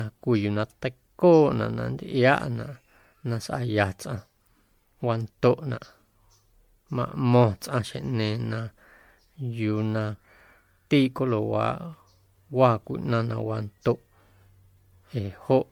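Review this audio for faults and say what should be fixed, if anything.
The speech sounds swirly, hollow and smeared throughout, with blurred attacks, likely generation loss from around ten MP3 passes at what sounds like 96 kbit/s. Fix it by going back to the original and encoding to MP3 only once, at the very end.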